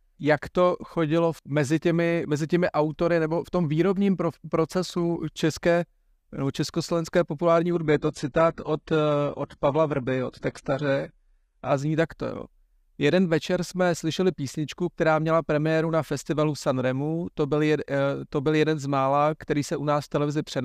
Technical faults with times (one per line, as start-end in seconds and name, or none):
7.71-11.71 adaptive stream at a lower bitrate